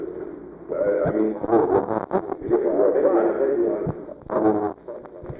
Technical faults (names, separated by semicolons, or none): none